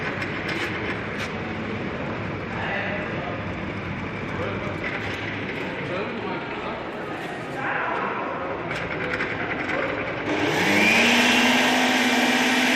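No faults are audible anywhere in the clip.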